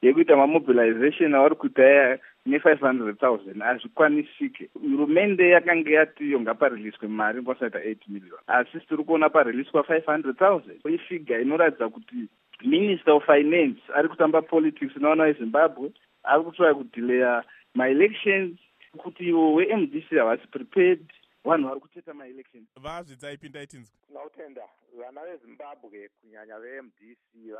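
Between 21.59 and 22.01 s there's zipper noise: the level drops by roughly 20 dB, but in unsmoothed steps at around 100 per second, so each jump clicks and you hear a fine zipping over the sound.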